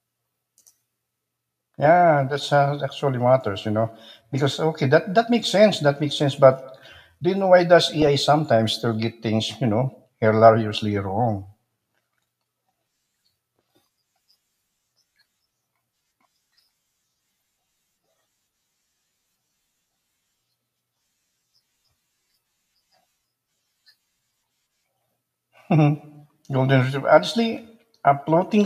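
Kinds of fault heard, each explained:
DAB burbling: There's a short burst of burbling from about 8.02 to 8.07 s, between "you know why does" and "sometimes still get". Bit errors got through the error correction into the MP2 data, putting short blips of noise into single sub-bands across a handful of frames.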